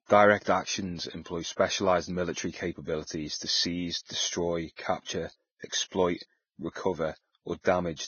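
Across the whole speech clip there is heavy damage, likely Vorbis compression at a very low rate, fitting something near 17 kbps. Nothing survives above 6.5 kHz, and the remaining treble is coarsely quantised into grainy hiss. Unlike broadband background noise, this grain follows the speech and roughens its tones.

From 0.43 to 0.46 s, just before "actions employ specialized military", a pre-echo of about 34 ms sounds. The codec's noise, sized for the loud onset, spreads back across the quiet moment before it, so a brief hiss precedes the attack and softens it. Unlike a click or dropout, the hiss comes ahead of the sound.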